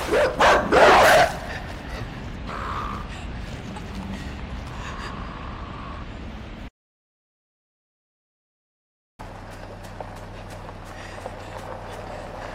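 At 6.69 s the sound drops to dead silence until 9.19 s, an audio dropout to silence of about 2.5 s, likely a lost input link.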